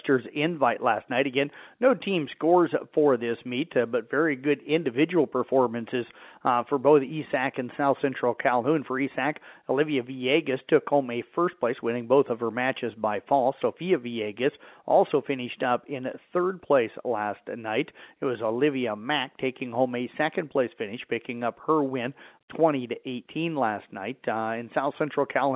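No technical faults are audible.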